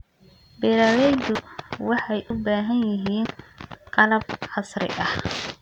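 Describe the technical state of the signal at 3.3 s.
At 3.25 s there's a skip: a short piece of speech, around 50 ms, just vanishes. That's likely audio missing between chunks, with 1-second chunks joined straight together.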